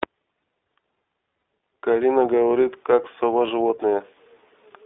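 Throughout, the speech sounds thin and slightly rough and synthetic, confined to about 300 Hz to 3.6 kHz: the iLBC codec, coding each frame independently, which fits its 15.2 kbps, 20 ms-frame mode. At 1.38 to 1.42 s, and again at 3.46 to 3.49 s, a brief held, buzzy vowel appears: lost iLBC frames, where the decoder repeated the last pitch cycle with noise before recovering immediately.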